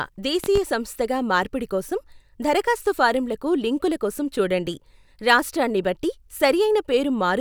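A sudden voltage step or pulse, likely from a plug, switch, static discharge or driver glitch, gets added to the signal path between 0.44 and 0.59 s, and the downstream circuitry shapes it into a brief transient. The result is a loud pop, heard as two sharp pops in quick succession standing roughly 10 dB above the speech, while the speech itself carries on underneath without a break.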